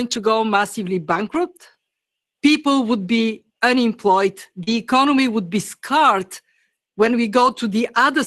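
Speech carried over an Opus call path, with the top end stopping around 12 kHz and the coding noise you'd expect at roughly 24 kbps. At 4.63 to 4.69 s, between "would be unemployed" and "economy would be", there's a short concealed packet loss. About 40 ms never arrived in time, and the decoder bridged most of it by stretching the preceding sound forward, so you hear a quick smear or wobble rather than a dropout. Overlapping that, from 4.67 to 4.73 s, is a lost packet rebuilt from error correction: about 40 ms played from the low-bitrate backup copy carried in the following packets, which makes that moment sound rougher and grainier. The same kind of fault comes back at 7.43 to 7.57 s, this time over about 80 ms. Again there's no gap, but a coarser, noisier patch where the decoder was working from the reduced-quality copies instead of the originals.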